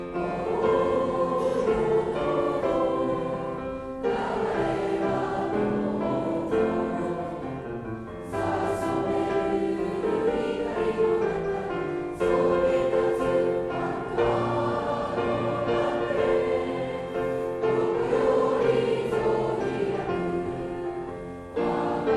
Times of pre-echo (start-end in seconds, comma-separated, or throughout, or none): none